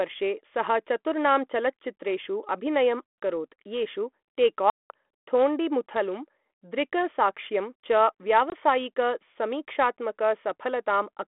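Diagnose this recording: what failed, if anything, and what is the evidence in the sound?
Hard-edged silent holes at 3.07–3.17, 4.70–4.91 and 8.50–8.54 s, each followed by speech returning slightly distorted, point to network packet loss on an ADPCM call, which leaves the decoder's adaptive predictor out of step.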